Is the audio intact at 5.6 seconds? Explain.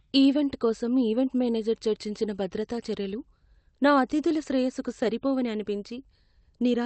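No. Around 5.6 s the speech is being edited in small steps, as tiny slivers are snipped out. This is clock drift between sender and receiver: the sender's clock runs around four percent fast, so audio arrives quicker than the receiver plays it out, and its jitter buffer keeps overfilling. That pressure persists across the whole clip, including this moment.

To cope, the receiver applies repeated timing corrections, running from 0.1 s to 6.82 s. It trims short pieces at irregular intervals, always in the same direction, which amounts to playing the material at about 104% speed. Each cut is small, so at 5.6 s it is a brief edit rather than a gap. The Opus call path's band limit near 8 kHz remains in place beneath these edits.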